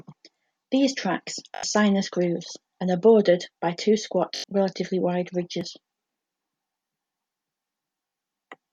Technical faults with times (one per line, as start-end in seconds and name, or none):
1.55-1.63 Bluetooth stutter
4.36-4.44 Bluetooth stutter
8.07-8.13 Bluetooth stutter